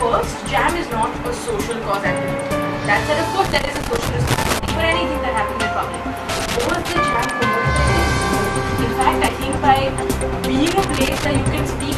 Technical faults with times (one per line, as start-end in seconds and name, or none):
3.45-4.70 loose connector crackle
4.50-4.53 damaged data in a compressed stream
6.29-7.30 loose connector crackle
9.25-9.28 damaged data in a compressed stream
10.66-11.25 loose connector crackle